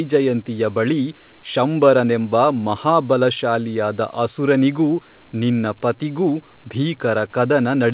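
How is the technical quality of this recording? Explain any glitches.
No glitches: the room noise sits about 52 dB below the speech, and the lack of anything above 4 kHz is the normal band limit of a G.711 A-law call path, not a defect.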